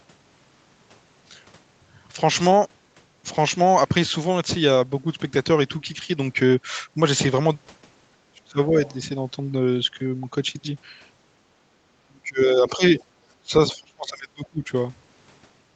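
When both ends of the call likely talked at once, the echo canceller could not tell the local talker from loudspeaker echo and turned everything down. This speech suppressed in double talk hits 8.31 to 8.74 s, 12.07 to 12.96 s, 13.42 to 13.54 s and 13.72 to 14.71 s. The voice sinks by about 25 to 30 dB, deepest in the second and last stretches.

The canceller also likely failed to remove all of the loudspeaker signal, so the other side's voice leaks through in brief faint scraps at 8.85 to 8.95 s and 12.99 to 13.04 s. They sit about 25 dB below the speech.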